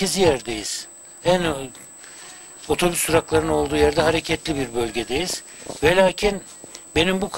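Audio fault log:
throughout USB whine: A thin, steady whistle at 8 kHz sits about 20 dB below the audio for the whole clip. That pitch matches the 125-microsecond microframe rate of a USB bus, whose current draw is leaking into the audio through shared power or ground.
throughout overlap-add ripple: The level rises and falls roughly 400 times a second with a swing of about 11 dB, heard as a metallic buzz with extra tones around each note. The audio was split into windowed frames and rejoined with an overlap whose gain does not sum evenly, so loudness dips once per frame.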